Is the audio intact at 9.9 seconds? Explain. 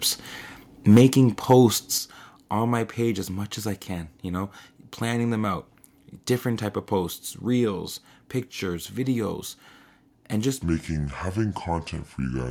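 Yes, the speech at 9.9 seconds is intact, with no audible dropout, click, distortion or other fault at that moment.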